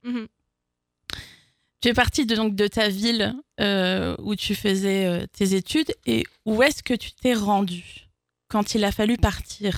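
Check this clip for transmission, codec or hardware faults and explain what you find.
Nothing here sounds wrong; I couldn't hear any transmission, codec or hardware trouble anywhere in it.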